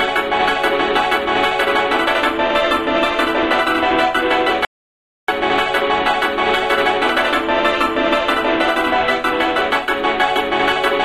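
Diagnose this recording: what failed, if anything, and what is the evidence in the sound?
Codec stage first. Around 2.47 to 2.51 s there's a short concealed stretch lasting about 36 ms. That's a corrupt frame concealed by the AAC decoder. Flipped bits made the frame fail its checks, so the decoder muted it or filled it with a scrambled copy of the last good spectrum. The length fits roughly two damaged frames.

The second problem is upstream of the encoder, on the capture side. From 4.65 to 5.28 s the sound cuts out mid-flow for about 0.63 s, and the gap is dead digital silence with no room tone at all, then it snaps straight back. That's an audio dropout to silence. The likely cause is that the input was lost, through a device disconnect, a link failure or a stray mute, while the recorder kept writing silence. Whatever happened during that stretch is gone.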